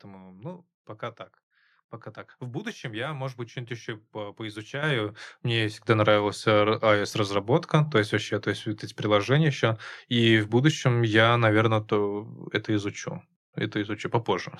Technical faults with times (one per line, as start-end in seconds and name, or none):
4.83 microphone volume stepped up
5.88 microphone volume stepped up